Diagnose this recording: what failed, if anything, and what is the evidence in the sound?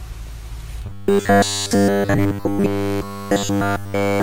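From 0.86 to 4.22 s, robotic sound from repeated short buffers: a fixed 100 Hz buzz, likely a looped 10 ms driver buffer, not codec warble.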